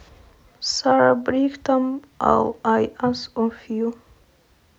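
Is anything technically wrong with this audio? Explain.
No, nothing technically wrong can be heard in this speech recording; the signal stays steady and intact throughout.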